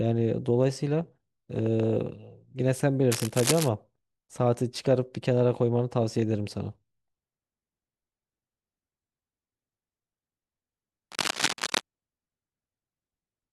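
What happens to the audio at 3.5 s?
Cable scratch noise runs from 3.11 to 3.69 s, covering the 3.5 s mark. The likely cause is a worn cable, plug or control being moved, so its contact resistance jumps around rapidly and injects dense, irregular bursts of noise into the signal. It is heard as a rough scratching and rustling laid over the speech for just over half a second, only a little quieter than the speech itself.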